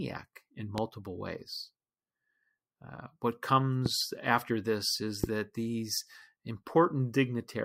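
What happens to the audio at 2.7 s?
Nothing goes wrong at 2.7 s; the speech carries on intact through that moment, with no dropout, click or distortion.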